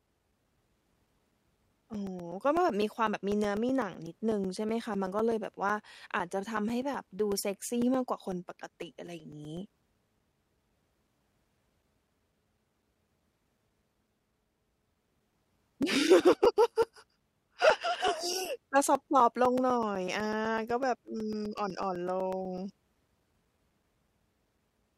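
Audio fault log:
0.07–24.83 s: periodic USB or driver dropouts. Every 0.125 s, eight times a second, a few milliseconds of audio vanish and are replaced by silence, around 200 times. Each gap cuts the speech abruptly, so steady ticks sound wherever there is signal.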